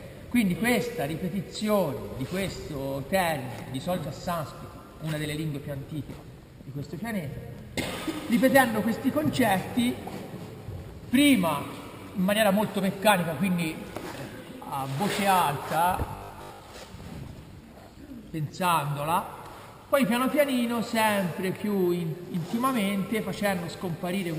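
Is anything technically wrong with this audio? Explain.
Yes. From 16.12 to 16.6 s the audio turns into a rigid, metallic buzz at 50 Hz that tracks the original sound only loosely. This is robotic sound from repeated short buffers, likely caused by new audio arriving too late: the playback software fills each gap by looping the most recent 20 ms chunk, which sets the 50 Hz repetition rate. Roughly seven-tenths of this stretch is repeated material, so the real audio underneath is largely skipped.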